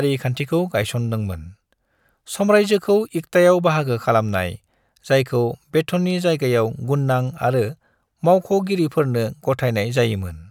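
No technical faults can be heard anywhere in the speech recording.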